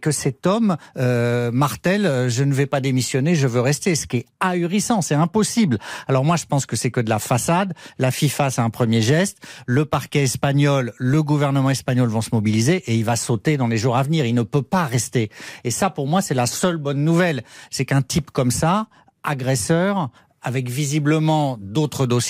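Speech recording with no audible technical faults anywhere.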